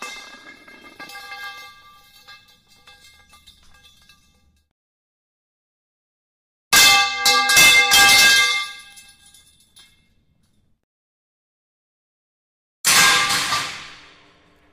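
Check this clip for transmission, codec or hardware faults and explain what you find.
Two faults stand out, both bit error spikes. The first is at 1.44 s and the second at 8.93 s. Each lasts a single sample. A flipped bit in storage or on a digital link made the sample value jump by a power of two, then snap straight back. The peaks reach about -17 dBFS and about -23 dBFS. Each one is heard as a single sharp tick. The tick is broadband and has nothing to do with the surrounding sound.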